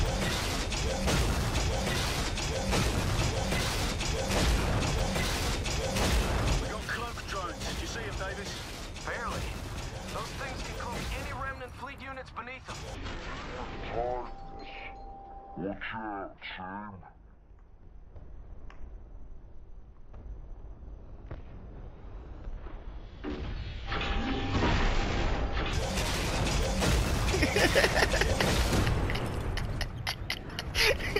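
At 12.95 s the audio drops into a section at the wrong speed, running at about 0.505x until 25.73 s. Everything turns slow and deep, about ten semitones down, likely from a player or edit locked to the wrong clock.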